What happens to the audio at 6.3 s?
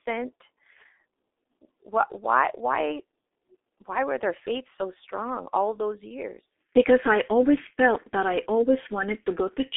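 At 6.3 s you're hearing the G.723.1 codec, and it isn't a one-off. That coding runs through the whole clip. The band is squeezed to roughly 300 Hz to 3.6 kHz, and the codec rebuilds speech from a coarse model that refreshes only once per 30 ms frame. The damage is heavy. The voice comes out muffled and hoarse, with smeared consonants, which points to a very low bitrate of around 6 kbit/s.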